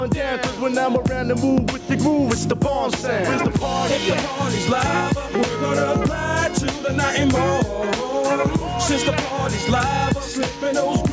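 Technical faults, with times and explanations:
Throughout, gain pumping: the gain swings by around 10 dB, pulling down under each loud sound, likely from excessive gain driving a fast limiter.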